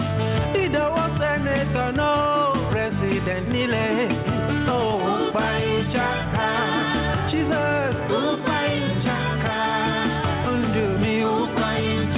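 Gain pumping runs through the whole clip. The swing is around 5 dB. Loud and soft passages sit closer in level than they should, and the sound feels squashed. The likely cause is an input gain set far too high, with a fast limiter or compressor pulling the level down on each loud moment.

At 2.70 to 2.72 s there is a skip ahead. Playback jumps forward with no gap filled in. Something like a second and a half of audio is gone, and the material on either side is butted straight together. This is what happens when a stretch is dropped in transit, or discarded by an overflowing jitter buffer, while later audio is already waiting to play.

From 4.23 to 6.26 s a jitter buffer speed-up plays the audio at about 115% speed with the pitch unchanged. It sounds hurried. The receiver held more audio than it wanted, so it trimmed many short pitch-period slices to cut the delay, about 0.3 s in total. 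A milder speed-up follows from 11.08 to 12.10 s, at about 105%, removing only about 50 ms. The call path's band limit is audible throughout, with nothing above 4 kHz. That fits G.711 A-law at 64 kbps.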